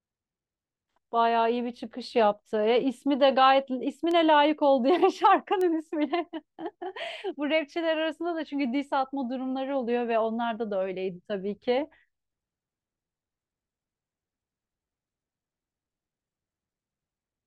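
At 4.11 s and again at 5.61 s the speech carries a bit error spike, a single flipped bit that throws a sample or a few by a power of two before it snaps back. Each is a sharp, signal-unrelated tick peaking near about −22 dBFS and about −16 dBFS, the first spanning a few samples. On a waveform each is a lone needle; on a spectrogram, a thin full-height vertical line.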